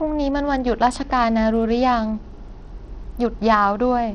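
Throughout the speech, gritty grain and flickering treble sit over the sound, with nothing above 18.2 kHz, likely Bluetooth SBC compression at a bitrate that fits roughly 80 kbps.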